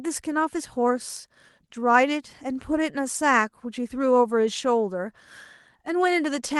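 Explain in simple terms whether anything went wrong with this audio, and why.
Nothing went wrong with this recording of speech. It passed through an ordinary internet call connection using the Opus codec, which keeps sound only up to about 12 kHz, so the very highest frequencies are missing, as is normal for a call.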